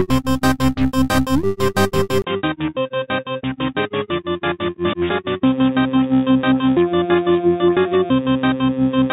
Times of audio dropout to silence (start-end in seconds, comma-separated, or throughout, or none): none